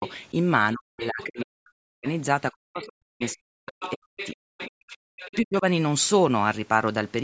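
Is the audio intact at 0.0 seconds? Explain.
No. From 0.00 to 0.04 s there is speech suppressed in double talk, likely because both sides were talking at once. The echo canceller could not tell the talker apart from the loudspeaker echo it was meant to remove, so it turned the microphone signal down. The talker's speech dips by around 15 dB at its deepest for those first 40 ms, so the opening sounds muted.

Right after, from 0.05 to 0.12 s, the other side's voice leaks through. The echo canceller most likely left a residue of the far-end voice, picked up from the loudspeaker, in the microphone signal. It sits roughly 20 dB below the talker, a faint scrap of a second voice under the start of the speech.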